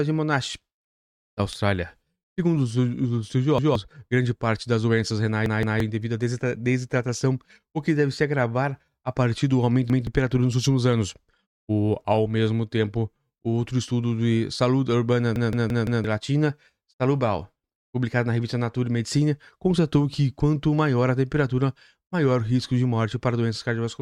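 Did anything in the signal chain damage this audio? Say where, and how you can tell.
Yes. The speech stutters at 3.58 s after "os os", 5.46 s, 9.90 s and 15.36 s after "estudo de saúde urbana". A 0.17 s chunk replays one to four times with hard joins. This is a repeated buffer at the driver stage: when new audio arrived late, the last block, which fits an 8192-sample buffer, played again.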